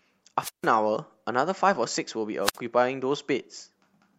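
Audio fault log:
0.41–0.68 s and 2.42–2.58 s, wireless microphone squelch dropout: the speech picks up a quick burst of hiss as the radio link fades. The receiver's squelch then mutes the output, leaving a hole of about 153 ms and then about 60 ms before the signal comes back.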